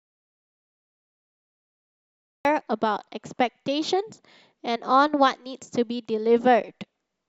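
An audio dropout to silence runs from the very start of this speech recording until 2.45 s. The input was likely lost, through a disconnected device, failed link or stray mute, while recording continued writing silence. The opening is dead silent, with no room tone, and the speech enters mid-flow.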